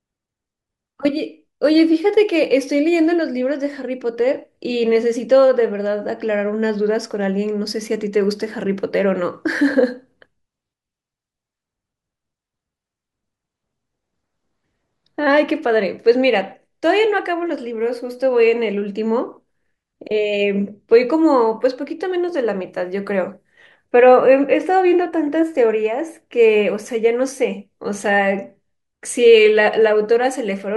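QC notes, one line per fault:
No faults heard in this speech clip.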